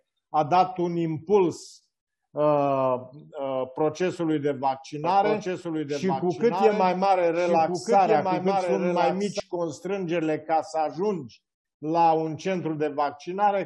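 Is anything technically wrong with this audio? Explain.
Yes. From 5.04 s to 9.40 s there is a doubled audio track. A second full-band copy of the sound runs about one and a half seconds behind and roughly 5 dB quieter, most likely because the signal was captured again along a slower path and mixed back in. Unlike an echo or reverb, the copy has no decay and no room colour, it repeats only once, and it cuts in and out abruptly.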